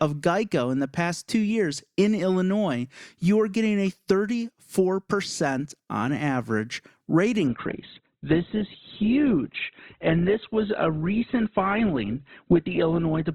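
At 7.47 s, just after "on average rate", the adaptive stream switches to a lower bitrate and stays there to the end of the clip. The connection appears to have slowed, so the player swapped to a leaner encoding, which fits a drop from about 64 to 12 kbit/s Opus. The speech continues with no gap, but its quality falls abruptly: nothing remains above about 4.1 kHz, leaving it dull, with more audible codec artefacts.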